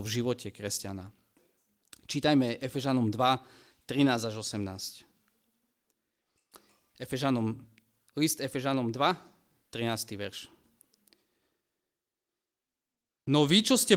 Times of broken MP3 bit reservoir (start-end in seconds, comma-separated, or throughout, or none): none